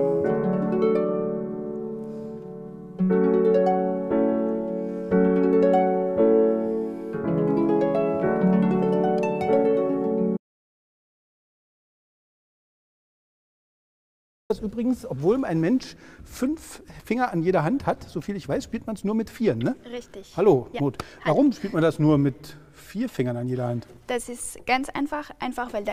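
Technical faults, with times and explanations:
10.37 to 14.50 s, audio dropout to silence: the sound cuts out into about 4.1 s of dead silence, with no room tone, likely from a lost input.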